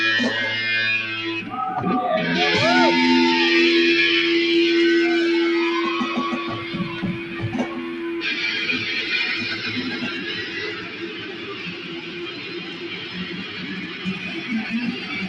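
A speech-tuned noise suppressor has been left running on non-speech material for the whole clip. It reads sustained tones, ambience and decays as noise and attenuates them, with the applied gain swinging by roughly 15 dB. Transients pass largely intact while the held portions behind them are pulled down, so the level pumps and the body of the sound thins between attacks.

Three stretches show the sound being cut by the noise suppressor more heavily than the surrounding material. From 6.57 to 7.48 s, then 7.65 to 8.05 s, sustained content sinks by up to about 6 dB, and tails shorten audibly. The longest section runs from 10.71 to 14.49 s, where the level drops by up to about 7 dB for roughly four seconds. Decays there fade out early instead of ringing naturally.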